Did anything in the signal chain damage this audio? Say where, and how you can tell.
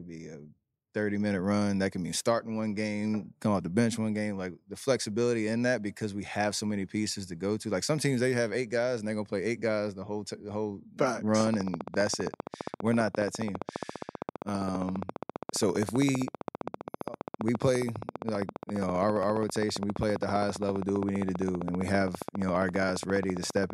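Yes. From 11.4 s to the end at 23.7 s a train of clicks sits over the speech: similar pops at a steady 15 per second, around two hundred in all, peaking about 10 dB above the speech and carrying straight through the pauses. The regular spacing and consistent shape point to interference coupling into the analogue wiring or a faulty connection or power supply as the likely cause. A spectrogram shows evenly spaced thin vertical broadband lines, and the waveform shows matching sharp spikes.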